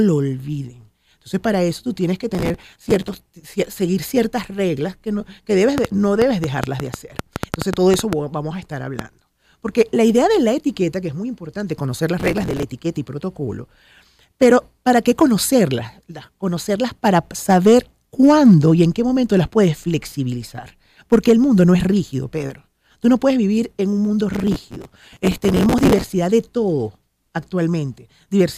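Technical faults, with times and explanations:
2.35–3.2 s, 12.2–12.63 s and 24.34–26.14 s: processor overload crackle. The processor falls behind and misses a long string of small buffer deadlines, which fits buffers of around 5 ms. Each missed slot replays a fragment of old audio with hard edges. Dozens of these in a row, and well over a hundred in the last burst, fuse into a gritty tearing over the sound. It stops when the load eases.
5.78–9.0 s: train of clicks. About fifteen similar sharp pulses ride over the sound, some 15 dB above it. They come near five per second, but the spacing is irregular, so the ticking stumbles rather than keeping time. The clicks keep coming in quieter moments too. Interference from nearby equipment or a faulty connection or power supply is the likely cause.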